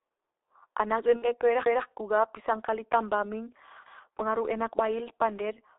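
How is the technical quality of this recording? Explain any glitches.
Technical quality is poor: the speech is heavily codec-degraded throughout, with one brief dropout glitch.

G.723.1 codec, throughout: a low-rate telephony coder, consistent with about 6.3 kbit/s, confines the speech to roughly 250 Hz to 3.7 kHz, leaving it muffled, hoarse and smeared in the consonants.

VoIP packet loss concealed by the speech codec, 1.17 to 1.28 s: about 60 ms of audio, fitting two lost 30 ms frames, was extrapolated from the previous frame, giving a buzzy or noisy, fading stretch with lingering weakness or distortion afterwards.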